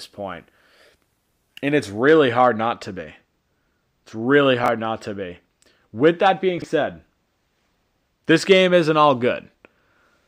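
From 2.01 s to the end, a channel delay of roughly two samples, about 0.05 ms, means the summed mono signal cancels at evenly spaced frequencies, producing comb filtering with a first notch near 10 kHz. The speech turns dull, losing its top end.

At 4.64 to 4.68 s, chunks out of order: a 20 ms block arrives one chunk late. At 6.58 to 6.64 s, another 20 ms chunk lands two chunks late. Each time, the hard joins cause a brief jumbled moment.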